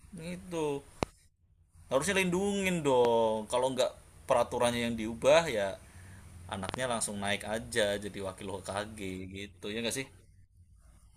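A speech recording interrupted by sharp loud pops: single clicks at 1.03 s and 3.05 s, each lasting only about 20 ms, then a double pop from 6.69 to 6.76 s. Each jumps roughly 20 dB above the speech, which carries on underneath. The likely cause is a sudden voltage spike, from a plug, switch, static discharge or driver glitch, entering the signal path and being shaped by the downstream circuitry into a brief thump.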